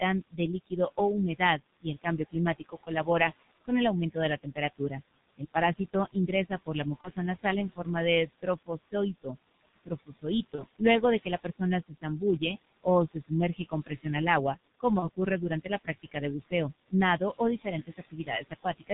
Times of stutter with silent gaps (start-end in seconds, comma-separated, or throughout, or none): none